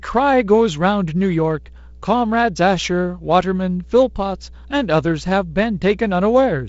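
A ground loop or nearby transformer is letting the 60 Hz power line leak into the signal for the whole clip, producing mains hum: a steady low tone, roughly 20 dB under the speech, sitting beneath the wideband telephone coding, which tops out near 7.7 kHz.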